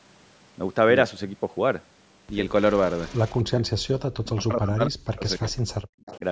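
From 2.71 to 3.39 s, a delayed copy of the far-end voice returns about 275 ms behind the original and roughly 25 dB below the speech. This is likely an echo leak: a loudspeaker signal the canceller did not fully remove.

Speech suppressed in double talk follows. The talker dips by around 40 dB from 3.42 to 3.73 s, and again for about a second between 4.22 and 5.45 s. The likely cause is the canceller mistaking the talker for loudspeaker echo.

From 5.78 to 5.91 s, the background is gated by the echo canceller. Room sound drops about 40 dB for a moment, then returns when the canceller releases.

The echo leak recurs from 6.04 to 6.19 s, 280 ms late and roughly 20 dB under the speech.

A shallow double-talk dip of a few dB follows from 6.19 to 6.24 s.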